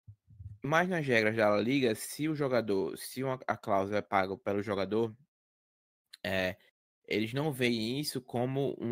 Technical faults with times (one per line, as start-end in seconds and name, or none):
none